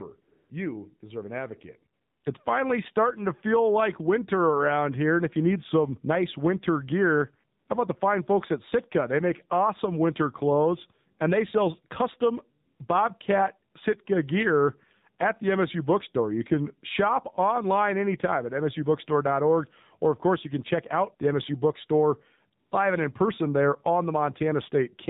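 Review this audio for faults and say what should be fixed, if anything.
The speech sounds buzzy, synthetic and dull throughout, with nothing above 4 kHz. That is the AMR narrowband mobile codec at a low rate, which fits the 7.4 kbps mode. Routing the call over a wideband codec such as AMR-WB, or at least a higher AMR-NB mode, would prevent it.

Smooth, steady hiss briefly replaces the real background at 0.22–0.50, 1.94–2.24, 7.60–7.68, 12.66–12.80, 13.72–13.74 and 22.60–22.72 s. This is AMR comfort noise: speech frames stopped and synthetic noise filled each gap, the longest lasting 300 ms. Disabling discontinuous transmission, or making voice-activity detection less aggressive, would prevent it.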